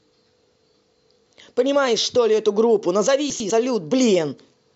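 At 3.3–3.5 s, chunks out of order: a 100 ms chunk plays one slot late, jumbling the speech, visible as three abrupt waveform discontinuities.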